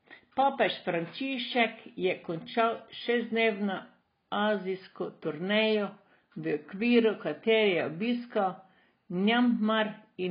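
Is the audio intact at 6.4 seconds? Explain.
No. At 6.4 seconds, as throughout the clip, the speech is heavily degraded, with nothing above 5 kHz. The cause is likely AAC compression at a low bitrate, which fits an AAC-LC stream of around 16 kbps. With so few bits per frame, the encoder drops the upper band entirely and quantises the remaining spectral lines coarsely, leaving gaps. The result sounds dull and smeared, with a warbling, fizzy texture on sustained sounds and sibilants.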